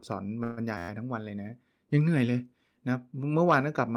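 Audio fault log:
0.43–0.60 s, call audio freeze: the sound smears into a fading 137 ms continuation, likely a starved jitter buffer; unlike a loop, nothing repeats and nothing is lost.
0.78–0.89 s, system hang loop: an 11.61 ms slice repeats exactly ten times, a steady 86.1 Hz buzz that fits a 512-sample buffer, rather than a fading continuation.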